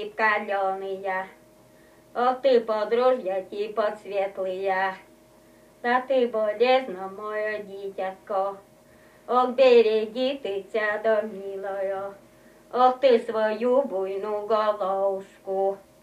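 Nothing in the audio stood out as a technical problem on listening.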